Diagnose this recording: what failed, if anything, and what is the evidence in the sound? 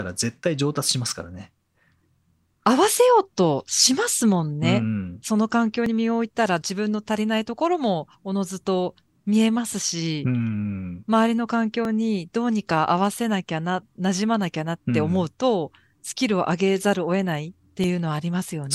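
Audio missing between chunks, at the driver or buffer stage: brief skips at 5.86, 11.85 and 17.84 s, each losing about 10 ms, spliced together with no silent gap. The strict 6-second spacing, unlike irregular network dropouts, points to a likely chunked recorder losing samples at each handover.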